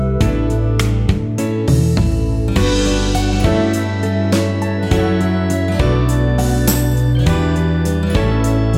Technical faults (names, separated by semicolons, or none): none